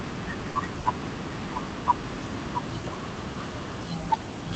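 Right from the start there's a doubled audio track: a second full-band copy of the speech trails roughly 0.7 s behind, about 10 dB quieter, with no decay or room colour. That's likely a second capture path or an edit leaving two copies out of step. On top of that, two bursts of packet loss hit at 0.49 to 0.58 s and 0.79 to 0.88 s. Each time, about 60 ms of concealment holds the last sound and fades it into a buzz or hiss, then the audio jumps ahead past roughly 60 ms that never arrived. Both gaps come through an Opus call path whose top end stops around 8 kHz.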